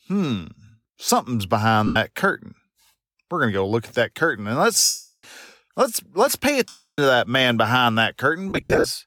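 Lost LE Audio frames at 1.87 s (90 ms, after "hmm something's"), 4.84 s (390 ms), 6.68 s (300 ms, after "let's let's pay") and 8.49 s (scattered over 360 ms, runs up to about 70 ms). Each time, the decoder repeats the last spectrum with random signs, producing a noisy smear that fades toward silence in the longer gaps.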